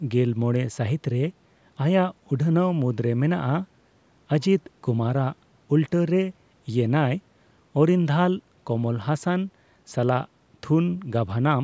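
No technical faults are audible.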